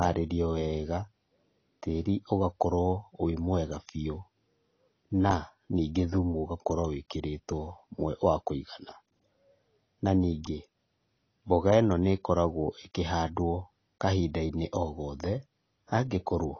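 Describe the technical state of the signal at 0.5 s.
At 0.5 s the speech already carries the AAC compression damage that runs through the whole clip. It sounds dull and smeared, with nothing above about 6.6 kHz and a warbly, fizzy edge on sibilants. That's the likely mark of a starved AAC-LC encode, which fits a bitrate somewhere around 24 kbps. Short of bits, the encoder drops the top band and quantises the remaining spectrum coarsely, so the detail gets smeared.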